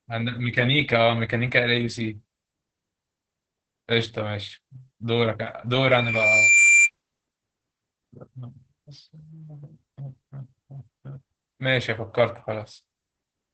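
From the very start the whole recording carries Opus voice compression, and it's the low-rate kind. The speech is muffled, with nothing above about 9.1 kHz, and it has that slightly hoarse, robotic edge you get when the SILK linear-prediction coder quantizes the excitation coarsely. The damage is heavy enough that it points to a bitrate somewhere around 10 kbps, with the coder squeezing the band and spending very few bits on each frame.

At 5.73 s a loudspeaker feedback squeal kicks in. A single tone at 2.4 kHz swells up over roughly three quarters of a second until it sits around 10 dB above the speech, then it cuts off at 6.90 s. What's happening is that the mic is picking up the loudspeaker it feeds, and at that one frequency the loop gain tops one, so the tone keeps growing until the loop is broken.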